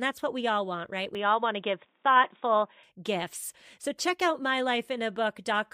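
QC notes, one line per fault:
1.15–2.83 s, input switched to a poorer device: just after "we all want right", capture likely moves to a narrower-band input with nothing above 3.8 kHz, so the speech turns dull and boxy, with a modest level shift and a faint new noise floor, switching back cleanly without any gap.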